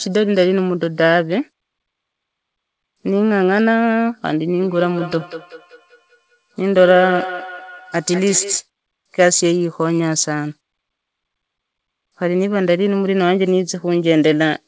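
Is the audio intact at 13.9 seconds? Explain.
Yes, the audio is intact at 13.9 seconds, with no fault at that moment.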